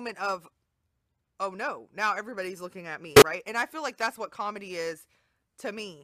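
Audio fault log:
3.14 to 3.22 s, corrupt frame concealed: 80 ms of the speech where the decoder papered over what sounds like three damaged AAC frames.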